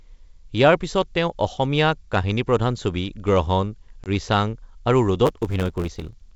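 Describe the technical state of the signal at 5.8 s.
At 5.8 s the speech is inside a block size mismatch (truncated), which runs from 5.25 s to the end of the clip at 6.35 s. One stage hands over longer blocks than the next reads, so the tail of each block is dropped. That leaves a 100 Hz buzz at the block rate, consistent with 512-sample writes, and the speech runs about 1.07 times fast. The timbre stays, which separates this from a sample-rate mismatch, where speed and pitch shift together. The G.722 wideband coding underneath is still audible as clear speech.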